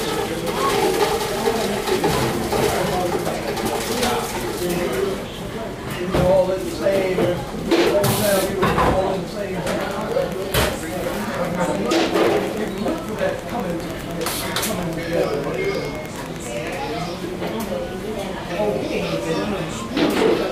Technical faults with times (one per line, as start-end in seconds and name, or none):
9.66-16.75 Wi-Fi interference